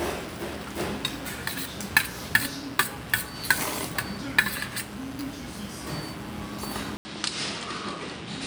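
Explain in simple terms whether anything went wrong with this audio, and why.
Near the end, the recording most likely jumped from one input to another, a case of the input switching to a poorer device. At 6.97 seconds the sound drops out for 80 milliseconds, and from there to the end it comes through the new input, which carries nothing above 9.7 kHz. The sounds lose their sparkle and turn duller, and a faint new background hiss appears underneath them, though the overall loudness stays about the same.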